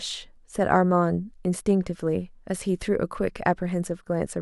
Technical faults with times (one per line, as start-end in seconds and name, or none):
none